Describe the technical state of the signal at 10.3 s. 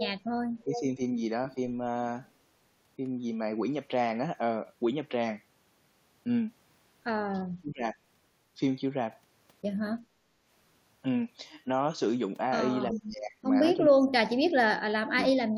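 The echo canceller is pulling the microphone down while the loudspeaker plays at 10.3 s, producing background gated by the echo canceller from 10.02 to 10.45 s. The room sound dips by up to about 7 dB for under half a second, then returns once the canceller releases.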